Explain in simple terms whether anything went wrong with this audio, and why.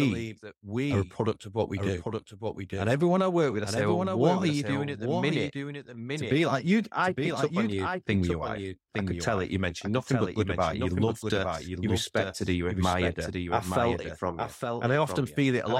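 Something did go wrong: from start to finish, every bit of the speech is heard twice, with a second copy trailing about a second behind the first and only a little quieter. It isn't an echo from a room, because the repeat doesn't fade away or sound distant. It is an exact duplicate. This is a doubled audio track, likely caused by the same recording being captured again through a slower route and mixed in with the original.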